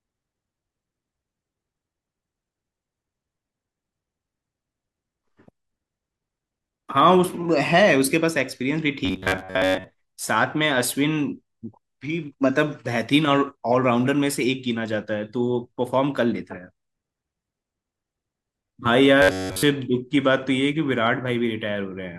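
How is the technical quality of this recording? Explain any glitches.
The speech is marred by two bursts of robotic sound from repeated short buffers, from 9.05 to 9.86 s and from 19.22 to 19.63 s. Both turn the voice into a hard metallic buzz near 94 Hz that loosely tracks the syllables, most of the first burst and all of the second. The likely cause is audio arriving too slowly, so the player loops a fragment of about 10.7 ms, skipping real audio and imposing that fixed pitch.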